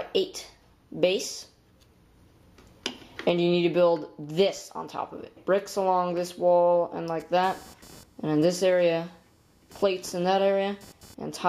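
From 7.20 s to 11.14 s, computer activity noise appears: a buzzing, chirping layer pulsing at around 500 Hz, sitting roughly 30 dB below the sound. Changing load in the computer is shifting the shared ground of the audio circuit, so the noise follows machine activity, not the audio.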